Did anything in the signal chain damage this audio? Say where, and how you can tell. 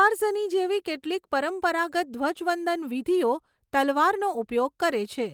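No, no faults are present.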